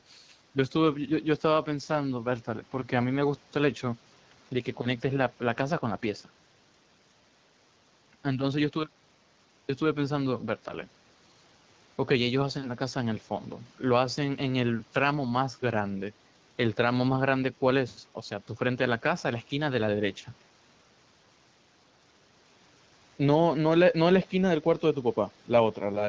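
Nothing is technically wrong with this speech clip.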